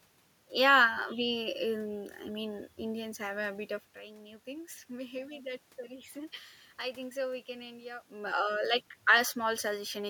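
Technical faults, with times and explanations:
No technical faults can be heard in this speech clip. A room noise sits underneath it, and the talker's level at the microphone shifts at around 3.5 and 8 seconds as the talker moves.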